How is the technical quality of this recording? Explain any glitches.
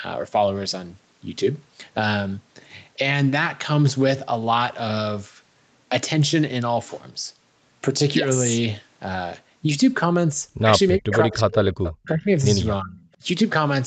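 The recording has two faults, both clustered in its last few seconds: speech suppressed in double talk and an echo leak. The sound stops at 8 kHz throughout, which fits a wideband call codec such as Opus at around 40 kbps.

Speech suppressed in double talk occurs at 10.97–11.45 s, 12.03–12.29 s and 12.81–12.99 s. The speech dips sharply, by up to about 40 dB in the first stretch and about 20 dB in the later two, for a few hundred milliseconds each time. This is likely an echo canceller that, with both sides talking, could not tell the local talker from returning loudspeaker sound and turned everything down. On a waveform the envelope caves in. On a spectrogram the energy thins to faint traces.

An echo leak appears at 11.12–11.54 s and again at 11.84–11.94 s. A delayed, weaker copy of the speech trails the original by 364 ms, at about 10 dB and then about 15 dB below it. The likely cause is a loudspeaker on one side whose echo canceller let part of the microphone pickup back into the call. 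A spectrogram shows the same harmonic patterns repeated faintly, offset 364 ms to the right.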